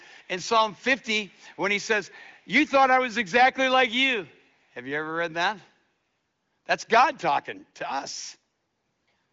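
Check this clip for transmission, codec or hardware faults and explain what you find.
One fault appears in this speech: an echo leak, heard as brief, very faint repeats of the talker from 0.23 to 0.27 s, 0.73 to 0.78 s and 1.3 to 1.58 s, each trailing the original by 398 ms. The likely cause is a loudspeaker at the far end whose playback reached its microphone and slipped past the echo canceller. The audio stops near 7.2 kHz, as expected of the AMR wideband (HD Voice) codec.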